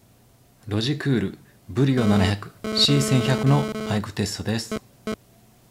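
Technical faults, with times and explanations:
1.98–5.14 s, GSM phone buzz: a nearby 2G handset's transmit bursts are rectified by the audio circuitry, injecting a hard, raspy 217 Hz buzz with many harmonics, about 5 dB below the signal, which cuts in and out as a data transfer would.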